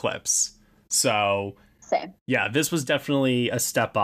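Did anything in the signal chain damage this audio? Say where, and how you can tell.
Yes. Hard clipping hit the speech at a converter or format stage. Peaks crackle from 2.35 to 2.93 s, then from 3.78 to 3.84 s. The level overshot that stage's ceiling by about 2 dB, then about 1 dB. Peaks were sliced flat, adding high harmonics.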